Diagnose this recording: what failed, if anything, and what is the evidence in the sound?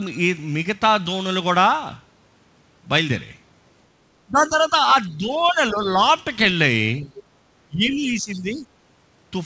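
Speech suppressed in double talk at 4.27 to 4.75 s, 5.09 to 5.98 s, 7.01 to 7.11 s and 7.68 to 8.65 s, a call-processing failure. The talker's level sinks by about 10 dB in the first three dips and by about 15 dB in the last, nearly a second long. The likely cause is the echo canceller treating near-end speech as loudspeaker echo while both parties spoke, and attenuating the microphone signal wholesale.

Other side's voice leaking through at 7.16 to 7.23 s, again in call processing. A brief, faint second voice surfaces about 20 dB below the talker, right after the short dip at 7.01 s. This is likely residual far-end echo: the canceller's model of the loudspeaker-to-microphone path fell short for a moment, letting a scrap of the remote party pass. Throughout, the band stops near 8 kHz, consistent with a G.722 call path.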